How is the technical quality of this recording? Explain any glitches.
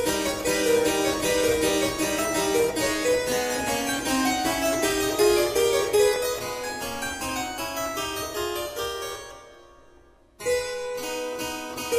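The recording has two brief glitches, both an overlap between stream segments, at 2.18 s and 6.16 s. In each case the time stamps of adjacent segments claimed the same stretch of time, so playback trimmed the overlap even though that sound existed only once. About 6 ms vanishes at 2.18 s and about 13 ms at 6.16 s, and the waveform jumps across each gap, heard as a tiny skip. The spacing of about 4 s between them fits segments 4 seconds long.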